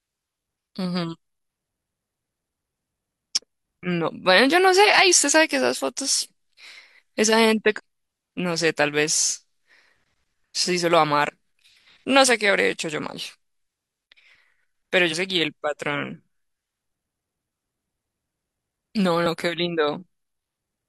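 A speech recording carrying damaged data in a compressed stream, heard as four brief chirps or blips at 7.74–7.80, 11.24–11.30, 15.08–15.14 and 19.22–19.27 s, each about 50 ms. Corrupted bytes make the decoder misread frames and lose sync until it finds a valid header. On a spectrogram each appears as a narrow vertical smear of broadband or oddly tonal energy breaking the speech harmonics; the waveform shows a short, irregular burst unlike its surroundings.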